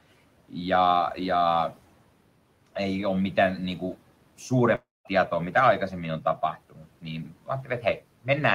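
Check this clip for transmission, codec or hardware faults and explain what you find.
Two faults are present: a network dropout and noise-suppressor clipping of the speech, with steady room noise about 25 dB below the speech.

From 4.75 to 5.08 s there is a long network dropout, likely caused by packets not arriving. The receiver extends the last sound as a decaying buzz or hiss, then about 200 ms of near-silence follows, and roughly 300 ms of speech never returns.

At 6.70 to 6.86 s and 7.25 to 7.49 s the noise suppressor misjudges speech as background and pulls it down by about 12 dB and about 10 dB. Quiet endings and soft consonants sound swallowed.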